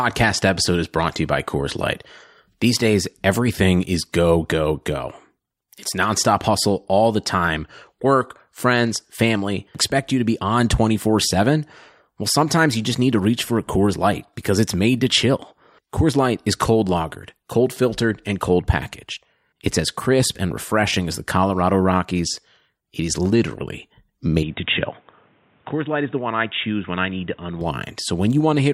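From 24.43 s to 27.61 s the speech suddenly goes dull and boxy, with nothing above 3.8 kHz, a drop of roughly 5 dB and faint new background noise, then clears again. That's likely the input switched to a poorer device, with no gap at the switch.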